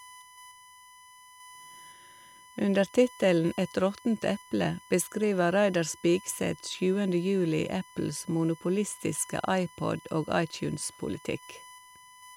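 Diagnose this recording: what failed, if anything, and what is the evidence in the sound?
A USB whine runs under the speech for the whole clip: a steady, fixed-pitch tone at 1 kHz, roughly 25 dB below the speech. The fault sits in the analogue wiring, where the USB bus's 1 ms frame activity leaks in through power or ground.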